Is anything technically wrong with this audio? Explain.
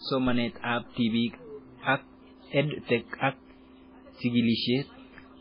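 Yes. Throughout, the speech sounds watery and swirly, with nothing above 5.2 kHz. This is likely heavy MP3 compression at a very low bitrate, near 16 kbps.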